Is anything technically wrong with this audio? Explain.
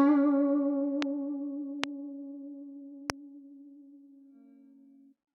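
Yes. There are three loud pops in the music, at 1.02, 1.84 and 3.10 s. Each is a single sharp hit, roughly 20 dB above the music, the middle one stronger at about 25 dB. The likely cause is a brief voltage spike from a switch, static or driver glitch. The music carries on underneath.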